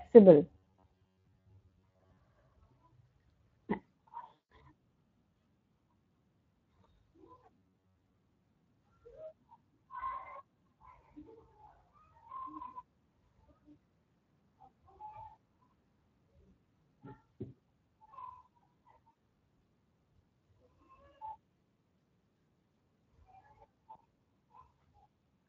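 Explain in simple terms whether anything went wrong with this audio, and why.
Several things went wrong. Throughout the clip, the speech has plainly audible Speex codec damage. Speex is an older speech codec from internet calls and game chat. It squeezes the voice hard. Here that makes the speech sound noisy, rough and hoarse.

From 0.51 to 2.17 s there is robotic sound from repeated short buffers. The speech turns into a stiff, metallic buzz at about 94 Hz. The likely cause is audio arriving too slowly. The player keeps repeating a tiny slice of roughly 11 ms, and most of the real sound in that stretch is skipped.

There are also four moments of VoIP packet loss concealed by the speech codec. They fall at 4.33 to 4.44 s, 11.02 to 11.04 s, 19.11 to 19.15 s and 23.91 to 23.97 s. Chunks of audio went missing, about 160 ms at the first point and 20 to 40 ms at the others. The decoder guessed at the gaps, so the sound smears into a fading buzz or hiss. 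It stays weak briefly afterwards.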